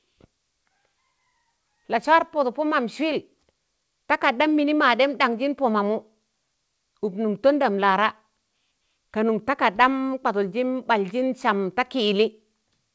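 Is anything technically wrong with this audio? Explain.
No, nothing in this speech recording points to a technical fault, and the absence of content above 8 kHz is just the ordinary band limit of a wideband call path, which fits a codec such as G.722.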